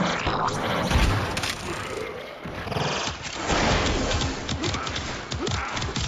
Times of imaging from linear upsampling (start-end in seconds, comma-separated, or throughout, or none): 0.53-2.80